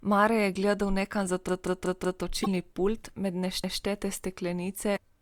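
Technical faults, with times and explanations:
1.49–2.23 s, repeated buffer: just after "je gledal nekam za" the same piece of about 0.19 s, which fits an 8192-sample buffer, plays five times in a row with a hard join at each seam. New audio arrived late and the device replayed its last block. Nothing is skipped, so the sound resumes where it left off.
2.42–2.47 s, damaged data in a compressed stream: a brief glitch of about 55 ms, between "je gledal nekam za" and "pult med". Corrupt bytes made the decoder misread frames and lose sync until it found the next valid header. Unlike the stutters, this is not a copy of earlier audio.
3.64–3.82 s, repeated buffer: after "pult med" one block of about 0.19 s is heard twice, with a hard seam at the join. The cause is the same late-delivery replay as before. It is the clean, exact repetition that separates it from a decode error.
4.93–4.98 s, damaged data in a compressed stream: another short glitch of about 55 ms, where damaged frames threw the decoder out of sync again.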